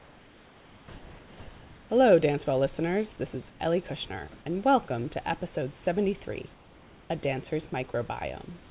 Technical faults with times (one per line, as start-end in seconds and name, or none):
3.50-3.60 comfort noise in place of the background
7.92-7.94 sound dropped by the voice detector